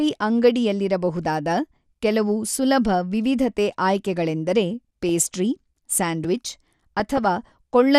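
Throughout, the speech is dull and gurgling, with the top bands flickering on and off. That points to likely MP2 compression at a rate around 80 kbps, rather than simple low-pass filtering. Just after "ಕೆಲವು ಸುಲಭ ವಿವಿಧತೆ ಆಯ್ಕೆಗಳೆಂದರೆ", from 5.06 to 5.09 s, DAB burbling gives a brief burst: bit errors slipped into the MP2 data and put short blips of noise in single sub-bands. The steady codec dullness never does that. At 6.24 s a block of digital silence 2.9 ms long, which fits a 128-sample buffer that was not filled in time, cuts abruptly to zero and back. It is heard as a tick rather than a bubbling sound. From 7.00 to 7.27 s DAB burbling returns as a longer stretch of noise blips in single sub-bands.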